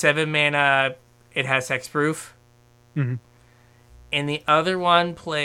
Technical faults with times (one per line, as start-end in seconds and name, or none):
0.00-5.44 mains buzz